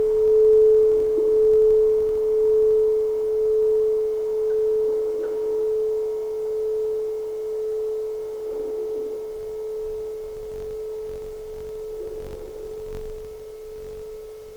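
Right from the start and running the whole way through, there's a low buzz riding under the sound at about 46.9 Hz, and that's the classic sign of a filter restarted on every block. The filter is throwing away its state at each block boundary and starting cold, so every block kicks off with a little transient. At that repeat rate it fits a 1024-sample block, and the ticks get louder and quieter along with the signal.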